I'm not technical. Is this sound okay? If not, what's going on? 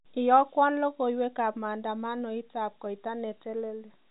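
Yes, it's fine; there's nothing wrong with it.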